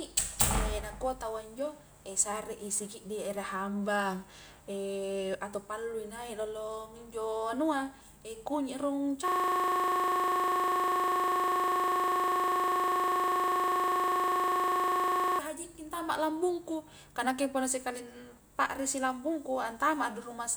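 From 9.28 to 15.39 s, a system hang loop: the system freezes, one 40 ms buffer replays identically, giving a steady 25 Hz buzz, not dropout gaps.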